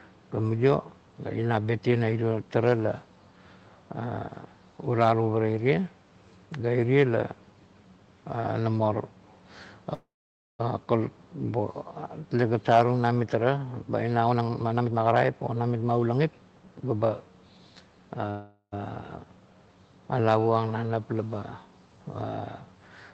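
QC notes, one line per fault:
9.93–10.61 s and 18.30–18.74 s, call audio freeze: packets were likely held up in transit so the jitter buffer ran dry, and the receiver stretched the last sound into a fading buzz. The first gap lasts about 0.66 s, with roughly 0.51 s of it dying to silence. The second lasts 0.42 s, with only about 60 ms silent. Each time the audio picks up exactly where it stopped, so nothing is lost, but the call runs later by the length of the gap.
14.25–16.13 s, jitter buffer speed-up: the buffer was holding more audio than its target, so the receiver trimmed repeated pitch-period-sized slices to bring the delay back down. Around 0.7 s in total was cut across this stretch, and playback runs at 134% speed. Because whole pitch cycles are removed rather than resampled, the pitch stays put while the speech sounds hurried for those two seconds.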